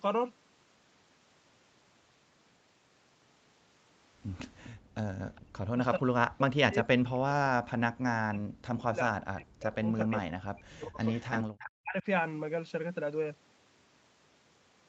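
Echo leak at 4.63 to 4.70 s: a faint delayed copy of the sound, about 25 dB below it and trailing by 408 ms, slips through, likely because the far end's echo canceller left residue from its loudspeaker.

Background gated by the echo canceller at 4.71 to 5.07 s: the canceller clamps the microphone while the loudspeaker plays, so the room tone dips by as much as about 36 dB for roughly 0.3 s before recovering.

Speech suppressed in double talk at 5.37 to 5.81 s, 5.97 to 10.99 s and 11.64 to 12.06 s: with both sides talking, the canceller likely mistakes the near talker for echo and pulls the speech down by around 40 dB. The speech dips, thins and breaks up in pieces, most extensively across the five-second stretch.

Echo leak again at 9.99 to 10.16 s, 11.04 to 11.43 s and 11.59 to 11.67 s: the delayed copy now trails by 328 ms and is much stronger, about 10, 5 and 15 dB below the speech respectively.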